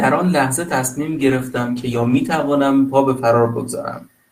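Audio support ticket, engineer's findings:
Call bitrate drop, 1.13–3.13 s. Speech turns coarse and watery, duller at the bottom of the dip for about 1.15 s. Encoder starved after bandwidth estimate fell, consistent with roughly 32 kbps cut to 15 kbps; recovers by 3.13 s.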